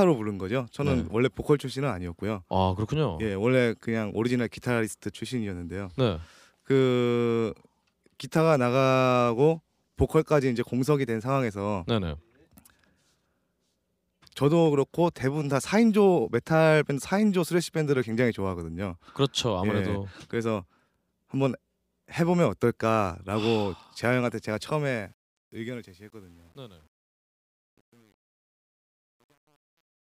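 From 24.51 s the speech fades out toward 30.1 s, but it carries truncation distortion. The fade stage keeps too few bits and adds no dither, which fits about 9 bits. From 25.49 s the tail turns gritty, unlike the clean hiss of dithered fading.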